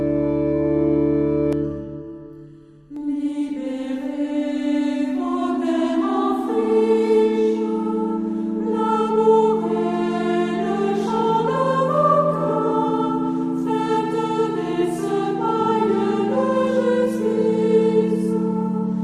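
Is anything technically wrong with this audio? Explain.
Yes. From 1.53 to 2.96 s there is channel delay (comb filtering): one channel runs late by about 0.7 ms, and when the two channels are summed to mono, content common to both cancels at evenly spaced frequencies. The first notch sits around 700 Hz, with further notches repeating roughly every 1.4 kHz above it. For that stretch the sound turns hollow and phasey, with a fixed colouration.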